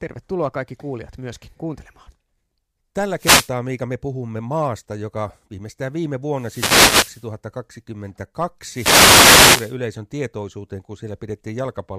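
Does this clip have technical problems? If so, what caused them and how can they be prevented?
Yes, three wireless microphone noise hits: 3.17–3.52 s, 6.33–7.29 s after "maasta joka viimeistään viime", and 8.67–9.77 s before "tietoisuuteen kun". Reflections cancel the FM radio signal, so receiver noise swells into static bursts. A diversity receiver with antennas in clear line of sight prevents it.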